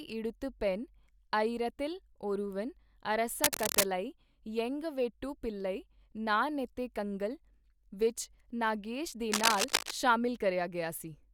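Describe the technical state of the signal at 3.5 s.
At 3.5 s the speech is overlaid by a dense, irregular scratching and rustling that runs from about 3.44 to 3.86 s and sits at roughly the same loudness as the speech itself. This is cable scratch noise. It is likely caused by a worn lead, connector or control being moved, so that its contact resistance jumps around rapidly and injects ragged bursts of noise into the signal for that moment.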